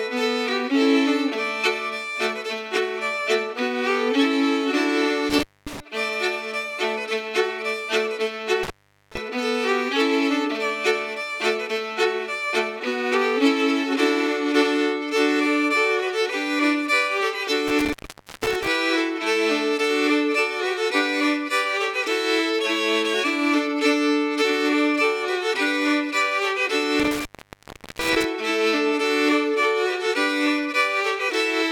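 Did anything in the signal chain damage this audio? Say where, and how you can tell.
Yes. An intermittent contact in the analogue wiring cuts the sound four times, at 5.30 to 5.80, 8.63 to 9.17, 17.68 to 18.68 and 27.00 to 28.24 s. Each dropout has crackle at its edges and faint hiss inside. A loose cable or plug opened for 0.24, 0.41, 0.50 and 0.74 s.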